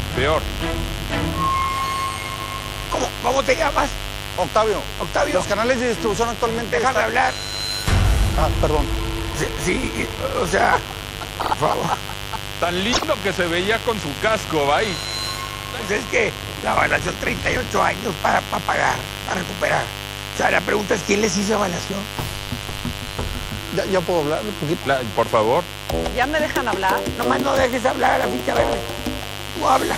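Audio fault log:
throughout, mains buzz: a steady, raspy 50 Hz buzz sits only about 10 dB below the signal. Sharp switching spikes twice per mains cycle spread harmonics of 50 Hz well up into the kilohertz range, giving it a coarse edge rather than a pure hum.
11.40–11.51 s and 12.92–13.04 s, repeated frames: a short block of compressed audio plays three times in a row, about 52 ms long at the first point and 26 ms at the second. This produces a stutter. The block sizes fit 26 ms codec frames, and the repeats add about 0.16 s in total.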